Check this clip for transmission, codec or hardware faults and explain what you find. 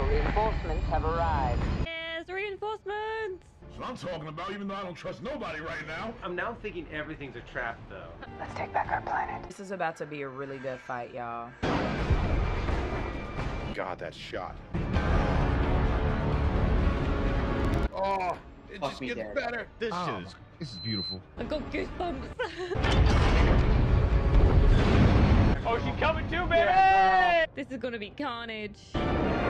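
Two faults stand out, both short. From 17.60 to 18.45 s there's a filter restarted on every block: it loses its state each time, so every block opens with a little transient, giving a 21.5 Hz buzz that fits a 2048-sample buffer. Then from 20.61 to 21.19 s comes a loudspeaker feedback squeal. The mic is catching its own speaker, and a 4.1 kHz tone swells up over roughly a third of a second, sitting just a few dB under the signal.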